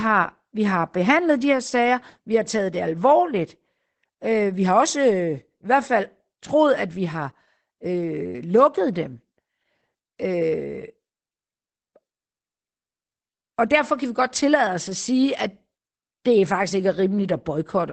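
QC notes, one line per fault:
Throughout: Opus voice compression. Nothing is present above about 8.7 kHz, consistent with wideband SILK linear-prediction coding. The excitation is coded coarsely, which fits a bitrate near 12 kbps, leaving the speech plainly muffled, hoarse and slightly robotic.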